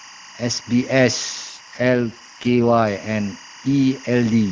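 Timecode bleed runs through the whole clip: linear timecode from a neighbouring track or cable has leaked into the audio, about 20 dB below the speech. Its square wave flips between tones near 1 and 2 kHz, heard as a steady chirping warble that fits 24-frame code.

An AMR rate drop follows from 1.49 to 2.87 s. The network forced the AMR-WB codec down to a lower mode, which sounds like a fall from about 23.85 to 8.85 kbit/s, so the speech turns rough and synthetic without losing bandwidth or leaving a gap, until the clearer higher rate returns.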